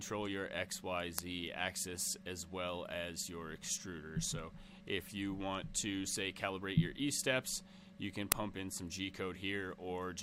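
At 1.19 s and again at 8.32 s there is an uninitialised buffer fault. A block was played before any audio was written into it, so stale memory came out as samples. Each is a very brief, loud crack. The first lasts about 0.7 ms, which fits a 32-sample block. The second lasts about 2.7 ms, which fits a 128-sample block.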